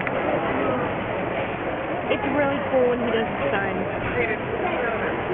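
From start to finish the audio carries aliasing. Everything sits below 3 kHz, the folding point, which fits a drop from a 44.1 kHz rate to about 6 kHz with no anti-alias filter first. Content that lay above 3 kHz has been mirrored back down into the band as unrelated, inharmonic tones, fairly strong, roughly ten decibels under the wanted sound, giving a gritty, metallic edge. A spectrogram shows energy running hard up to a sharp 3 kHz ceiling, with mirrored streaks sweeping opposite to the true harmonics.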